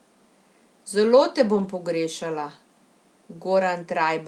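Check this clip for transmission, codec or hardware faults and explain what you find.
There's one fault, a lost packet rebuilt from error correction, from 1.55 to 1.65 s. About 60 ms of speech, which fits three 20 ms packets, was lost and replaced by the low-bitrate backup copies carried in the following packets. So there's no gap, but that stretch sounds rougher and noisier for a moment.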